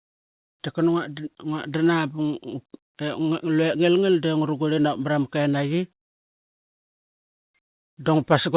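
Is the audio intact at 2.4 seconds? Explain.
Yes, the speech at 2.4 seconds is intact, with no dropout, glitch or distortion at that moment, only the narrow band of a G.711 mu-law call path, with nothing above 4 kHz.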